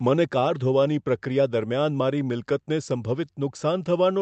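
Throughout the clip there is clock drift between sender and receiver: the sending side's clock runs roughly 3% slow, so the jitter buffer keeps draining. Unlike a single dropout or a burst of packet loss, there is no one damaged moment. Instead the timing keeps slipping, the same way, for the whole clip.

The receiver compensates with repeated timing corrections from 0.10 to 4.13 s, stretching the speech to about 97% speed and adding around 150 ms in total. Each correction is small, a slight repeat-like hiccup or a momentary drag at uneven spacing, all lengthening. That steady same-direction pattern separates it from random jitter, which would push the timing both ways, and from a clean tempo change, which would sound smooth rather than unevenly nudged. The call path also limits the band to about 8 kHz.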